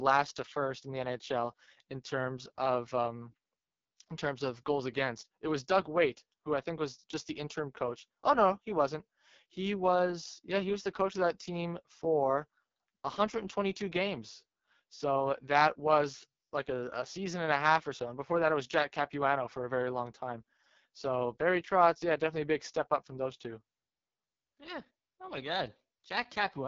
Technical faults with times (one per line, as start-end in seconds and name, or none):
0.00-26.67 AMR wideband (HD Voice) codec